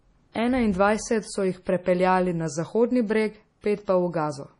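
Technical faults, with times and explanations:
Throughout: MP3 compression. The speech sounds watery and swirly, with nothing above 10.5 kHz, so the top end is simply gone. Weak detail flickers in and out between frames. The damage is heavy, likely from MP3 at a low bitrate around 32 kbps.
3.61 to 3.64 s: pre-echo. A short hiss of about 25 ms creeps in just ahead of a sharp attack, which lands soft and smeared. The codec spread noise meant for the loud onset across its whole block, including the quiet gap before it.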